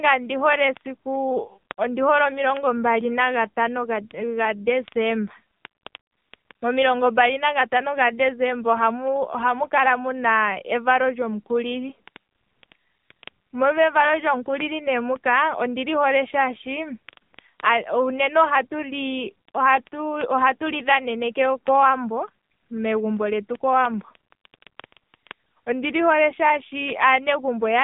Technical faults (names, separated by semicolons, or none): AMR narrowband mobile codec